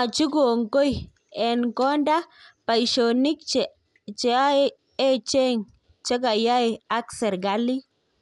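It's a short speech recording, and the whole thing sounds dull and rough, with nothing above about 11.5 kHz and a grainy, fluttering noise hanging around the tonal parts of the voice. That combination most likely comes from Dolby Digital compression at a low bitrate, something that fits roughly 64 kbps: the encoder narrows the band and leaves many frequency lines without detail, and the decoder papers over them with dither noise.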